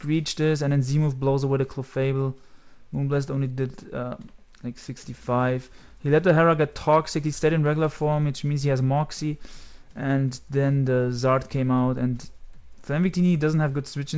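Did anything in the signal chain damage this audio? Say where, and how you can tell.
No, nothing in the chain damaged it: the audio came through a call path whose codec leaves nothing above 8 kHz, which fits G.722 wideband coding at 64 kbps, and that ceiling is simply how that codec works.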